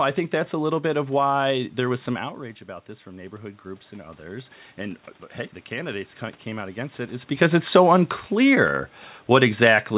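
From 3.03 to 5.08 s, speech and room noise swell together by about 5 dB. This is automatic gain rising, answering an input drop of about 12 dB.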